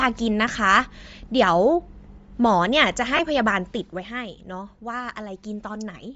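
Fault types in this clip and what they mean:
Bluetooth LC3 compression: The speech has a breathy, grainy upper edge throughout, likely from LC3 coding at a low bitrate that zeroes high frequencies and fills them with noise.
Lost LE Audio frames: Brief noisy smears at 0.53 s and 3.17 s, each about 20 ms, fitting two lost 10 ms frames that the decoder concealed by reusing the last spectrum.
Zipper noise: A fine ticking rides on the speech from 3.47 to 4.09 s as the level falls about 10 dB in unsmoothed 2 dB steps, roughly ten per second.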